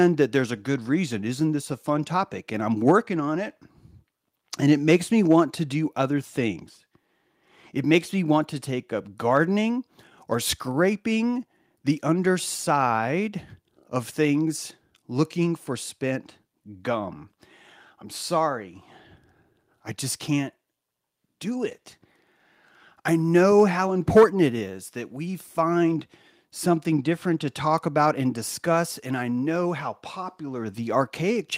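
No technical faults can be heard anywhere here.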